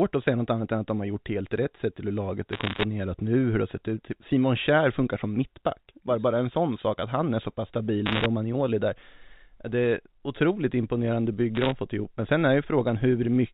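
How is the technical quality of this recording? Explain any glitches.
The recording has three short bursts of bit errors on a digital phone line, heard as crackle over the speech, which itself is band-limited below 4 kHz in the way telephone coding such as G.711 produces.

The first burst runs from 2.53 to 2.84 s, between "till hur laget är" and "nu hur det har". The second runs from 8.06 to 8.26 s, right after "han är så pass", and is the densest, with roughly one bit in fifty flipped. The third runs from 11.55 to 11.72 s, between "otroligt imponerande" and "fått ihop". The first and third bursts have around one bit in a hundred flipped. Each flipped bit corrupts a single 8-bit logarithmic sample. Hits on the sign or upper bits throw that sample far from its true value, giving sharp ticks. Clustered together, these ticks form crackle laid over intact speech.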